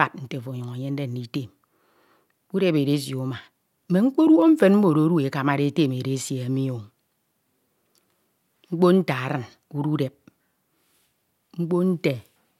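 No technical faults can be heard anywhere in this recording.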